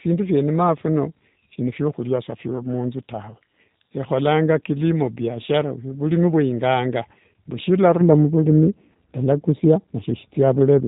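From the start, the speech runs through the G.729 codec at 8 kbit/s. It rebuilds each short frame from a vocal tract model, a pitch predictor and a few pulses. Nothing above 3.8 kHz survives. The damage is plainly audible, rough and slightly synthetic.

From 8.01 s to the end at 10.88 s, de-emphasis is applied wrongly. A treble cut meant to undo a boost that was never there, or applied twice, tilts the response down, by about 11 dB at 10 kHz relative to 1 kHz. The sound turns dull and muffled.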